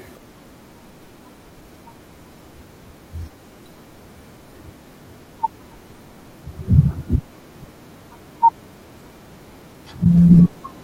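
At 3.31 to 3.33 s, 6.91 to 6.93 s and 10.04 s, a corrupt frame was decoded. Damaged bits sent energy to wrong frequencies. Each is a brief squeak or blip in the speech. The first is faint, the second louder, the third close to full scale.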